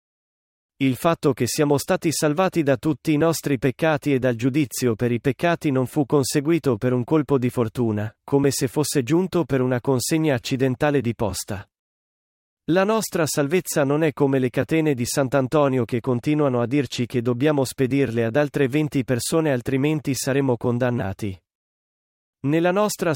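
Channel delay (comb filtering) from 15.89 to 17.03 s, before "che dobbiamo spedirle ad": one channel lags by roughly one sample, notching near 20 kHz and dulling the top end.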